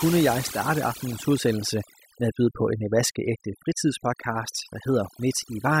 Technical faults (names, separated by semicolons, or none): overdone noise removal